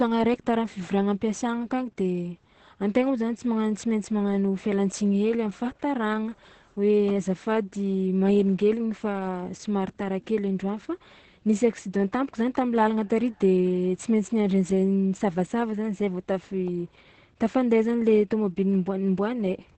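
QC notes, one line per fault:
Throughout: Opus voice compression, heavy. The speech is muffled and hoarse with a slightly robotic edge, and nothing is heard above about 8.6 kHz. This fits Opus at around 10 kbps in its SILK linear-prediction mode at wideband. With so few bits, the encoder keeps only the band up to 8 kHz and codes the excitation coarsely in 20 ms frames, so the crisp edges of the voice are lost.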